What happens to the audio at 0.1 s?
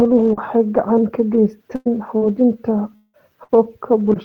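At 0.1 s the speech is intact, with no dropout, click, distortion or other fault at that point.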